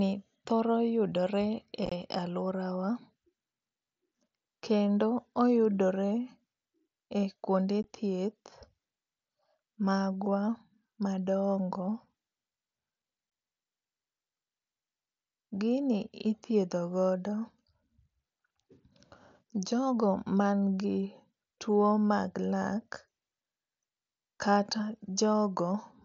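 Unconcealed Bluetooth headset packet loss drops short voice packets between headset and phone, leaving silence in their place. At 1.86 to 1.92 s, several holes are scattered over 60 ms, the longest 22.5 ms. Single 15 ms gaps follow at 7.83 s and 13.3 s. Each gap breaks the mSBC wideband speech with abrupt edges.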